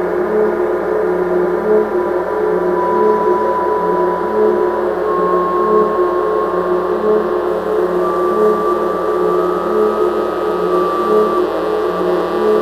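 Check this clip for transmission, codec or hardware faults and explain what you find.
Sample clock jitter appears from 7.47 s to the end of the clip. The converter's sampling clock wanders by roughly a few microseconds, so samples land early or late; the error scales with waveform slope, giving a hiss or grit about 35 dB under loud, bright passages that disappears in silence.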